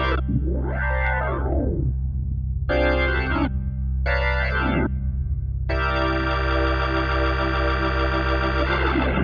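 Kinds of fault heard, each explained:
No faults turn up anywhere in this one, so there's nothing to list.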